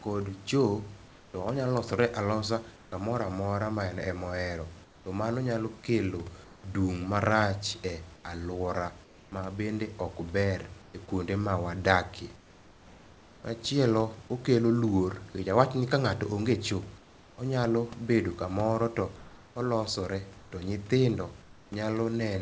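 Between 1.08 and 13.44 s, and again between 16.98 and 21.72 s, the pauses lose their real room background for about 2.4 s and 1.24 s in total. It is replaced by a steady, featureless hiss. This is comfort noise in place of the background, likely from discontinuous transmission muting the sender during silence. The room noise itself, about 26 dB below the speech, is heard outside those replaced pauses, and nothing reaches above 8 kHz, which fits a G.722 call path.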